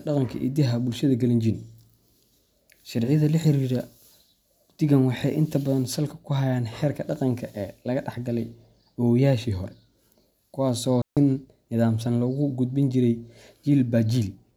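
At 11.02 s, right after "kuwaas oo", the speech drops into a clean hole of near silence lasting about 0.15 s, ending at 11.17 s. There is no click, hiss or crackle on either side. This is a digital wireless dropout. The radio link between transmitter and receiver lost too much data to rebuild the audio, so the receiver briefly faded its output to silence and then resumed once valid data returned.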